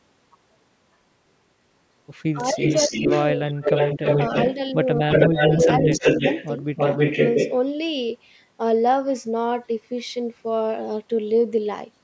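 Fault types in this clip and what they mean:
Speech suppressed in double talk: The speech level dips in four short stretches, each lasting a few tenths of a second: from 2.34 to 2.96 s by about 10 dB, 3.34 to 3.73 s by about 30 dB, 5.02 to 5.43 s by about 20 dB, and 5.79 to 6.26 s by about 10 dB. The likely cause is an echo canceller turning everything down while both sides talked at once.
Echo leak: A delayed copy of the voice runs under the speech from 2.52 to 4.54 s and from 5.1 to 7.59 s. The delay is 306 ms in the first stretch and 317 ms in the second. The first copy is about as loud as the speech, and the second is somewhat louder. This is likely loudspeaker pickup that the far end's echo canceller failed to remove. The fixed delay of around 300 ms separates it from room reverberation, which trails smoothly instead of repeating the voice.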